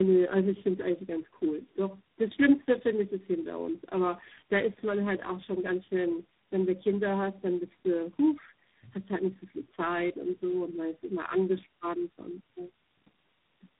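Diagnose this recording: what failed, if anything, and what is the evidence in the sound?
The codec stage failed: this is tandem speech coding across the whole clip. The speech sounds rough, muffled and warbly, with nothing above 3.8 kHz. That points to three low-rate speech codecs in a row, such as two AMR-NB hops ending in G.726. Each re-encodes the last one's damage, so the artefacts stack.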